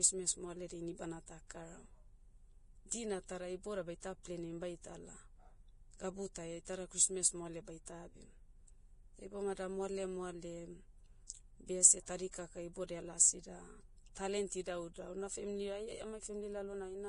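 Right from the start the speech has that grainy, hissy texture you get from heavy lossy coding, and it's most likely Vorbis compression. Nothing survives above about 10.5 kHz, and the treble that remains has been quantised so coarsely that fine detail turns into noise of roughly the same energy, roughening tones and softening attacks. The amount of damage fits a low bitrate somewhere around 29 kbps.

Then at 7.85 s, just after "christmas moale", there's a brief pre-echo. An 18 ms smear of hiss comes in ahead of an attack. The codec spread its quantisation noise across the whole transform block, so noise sized for the loud onset also fills the quiet moment just before it, and the attack itself comes across blurred rather than crisp.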